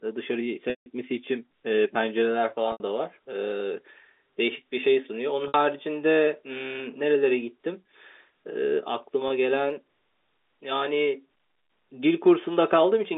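Packet loss with pitch repetition occurs at 0.70, 2.72 and 5.48 s, dropping 160, 80 and 60 ms. The receiver loops the last pitch period and fades it out. Each gap fades out over about 50 ms, and the speech returns with a short cross-fade. The lengths fit 20 ms packets.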